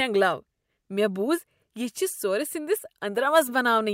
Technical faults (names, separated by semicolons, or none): none